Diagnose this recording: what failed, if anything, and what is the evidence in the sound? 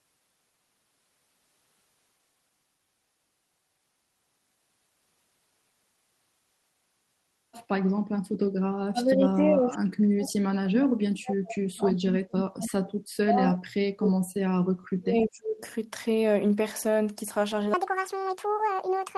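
Call processing: the speech is gated down at 8.89–9.78 s by about 15 dB, then by about 40 dB at 10.0–14.31 s and 14.7–15.61 s. This is likely speech suppressed in double talk, with the echo canceller turning down its own talker along with the loudspeaker echo. The waveform shows collapsed envelopes, and the spectrogram shows dark, gappy bands.

Playback or editing: from 17.74 s to the end, the speech runs 1.8 times fast, about 10 semitones high and hurried. This is a section at the wrong speed, likely from a clock mismatch. On the spectrogram, the harmonics jump upward and spread apart, and the syllables compress in time.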